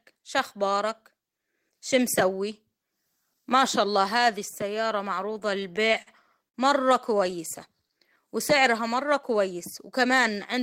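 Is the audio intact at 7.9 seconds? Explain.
No. A jitter buffer slow-down runs from 7.69 to 8.23 s, just before "وسعرها مرة كويس". Repeated pitch periods or bits of pauses add 62 ms, playing at 90% speed with unchanged pitch.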